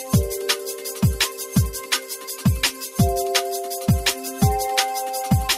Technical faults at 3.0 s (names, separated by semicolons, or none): noise suppressor applied to music or sounds; sound cut by the noise suppressor